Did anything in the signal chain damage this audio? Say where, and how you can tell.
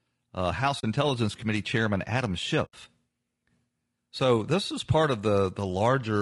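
Yes. At the codec stage, the speech is rough and grainy throughout, with noise between harmonics: likely low-delay AAC compression (AAC-ELD), consistent with roughly 32 kbps.

Over the network, there are two soft-edged dropouts from AAC frame loss with muting: 0.79–0.84 s (40 ms) and 2.65–2.74 s (80 ms). The decoder zeroed the missing frames and faded across them.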